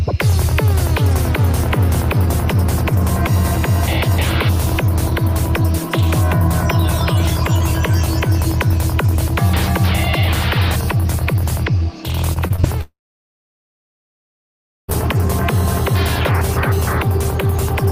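From 12.33 to 12.65 s, repeated packet loss (robotic sound) occurs: packets repeatedly failed to arrive in time, leaving four short holes of up to 23 ms each. The receiver filled each by extending the previous sound, so about a quarter of this span is patched, giving a choppy stutter.

At 12.81 s the audio stops for about 2.1 s until 14.90 s, likely a long network dropout in which nothing reached the receiver. A brief fading continuation of the last sound gives way to roughly 1.9 s of silence, and playback resumes with that stretch missing.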